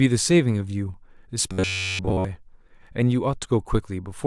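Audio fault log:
1.52–2.25 s, robotic sound from repeated short buffers: the speech turns into a rigid, metallic buzz at 93.8 Hz that only loosely follows its shape. Audio likely arrived too seldom, so a chunk of about 11 ms was replayed across the entire span.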